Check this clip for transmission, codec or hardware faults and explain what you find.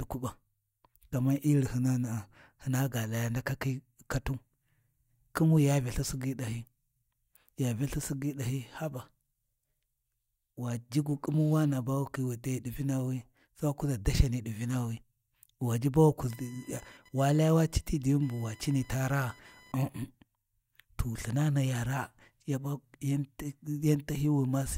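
There's one hardware fault. From 16.3 to 19.75 s, computer activity noise: a chirpy buzz around 1 kHz, roughly 30 dB under the speech, as the computer's load changes shift the audio's shared ground.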